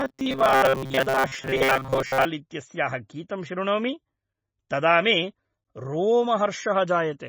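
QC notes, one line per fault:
throughout, MP3 compression: the speech sounds heavily watery and swirly, with smeared attacks. This is likely from low-bitrate MP3 coding, consistent with about 24 kbps, where the treble is cut and weak frequency lines switch on and off between frames.
0.01–2.26 s, robotic sound from repeated short buffers: the speech becomes a rigid metallic buzz at 133 Hz that only loosely follows the words. This is likely from audio arriving too seldom, so a stretch of about 7.5 ms was replayed over and over while most of the real audio was skipped.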